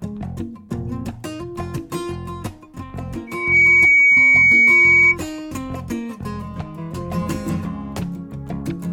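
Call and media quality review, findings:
Loudspeaker feedback squeal, 3.27–5.16 s. Steady 2.3 kHz tone swelling out of the music within about a third of a second, then sitting roughly 15 dB above it. Probable component: mic/loudspeaker acoustic loop. Loop gain above unity at 2.3 kHz. Tone self-sustains until the loop breaks.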